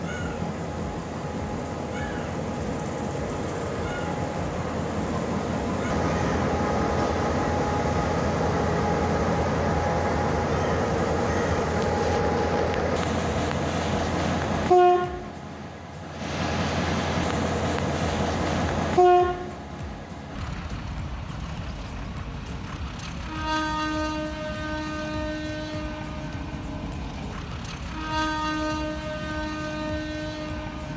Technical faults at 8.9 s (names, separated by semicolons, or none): none